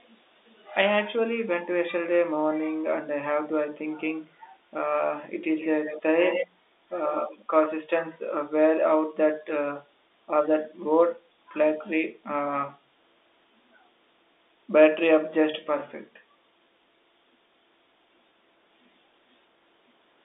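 Echo leak appears in three bursts, at 5.56 to 6.02 s, 6.2 to 6.47 s and 7.09 to 7.39 s. Each time, a second copy of the speech trails the original by 125 ms. It is quiet in the first burst, roughly 15 dB down, strongest in the second at only about 5 dB below, and in between in the third, about 10 dB down. The likely cause is a far-end loudspeaker whose echo canceller failed to subtract all of the sound its microphone picked up, so a delayed residue came back down the line.

Packet loss with pitch repetition occurs at 12.66 to 12.68 s. A gap of about 20 ms, which fits a single lost packet, was concealed by repeating the last pitch cycle of the speech. Because the gap is so short, the repeated cycle does not fade into silence. It is heard as a brief held, slightly buzzy tone before normal speech resumes, all within the narrow 250 Hz to 3.7 kHz band of the G.711 telephone path.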